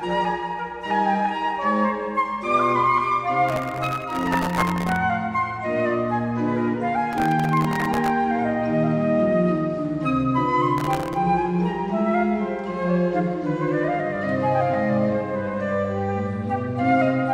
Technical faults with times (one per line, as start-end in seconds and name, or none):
3.49-4.96 processor overload crackle
7.13-8.10 processor overload crackle
10.78-11.16 processor overload crackle